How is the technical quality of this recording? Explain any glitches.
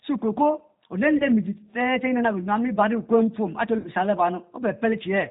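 The technical quality is limited: this speech is plainly coloured by a low-bitrate voice codec throughout, with two short dropouts patched over by the decoder.

G.729 codec, across the whole clip: nothing above 4 kHz survives, and the voice has the rough, slightly synthetic grain that fits G.729A at 8 kbit/s. This codec does not send the waveform itself. The decoder rebuilds each 10 ms frame from a vocal-tract filter, a pitch predictor and a handful of pulses, so the damage is plainly audible as a rough, synthetic texture.

VoIP packet loss concealed by the speech codec, at 1.17 to 1.26 s and 3.78 to 3.86 s: about 30 ms of audio is missing in the first gap and 60 ms in the second, which points to one and then two lost packets. The decoder fills each hole by repeating its last pitch and filter at falling gain. The result is a brief stretched smear, buzzy or noisy, that fades, and the voice stays weak for a moment afterwards while the frames rebuild.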